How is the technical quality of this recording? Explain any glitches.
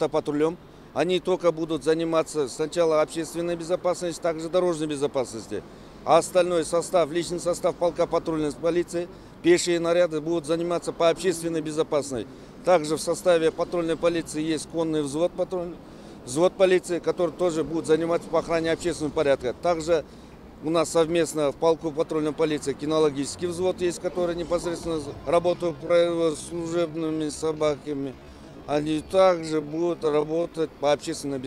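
A time-stretched section spoils the last part of the recording. From 25.49 to 30.63 s the pace suddenly drops to about 0.615 times normal speed while the pitch stays put, likely from software slowing the audio by repeating short slices, leaving it dragging.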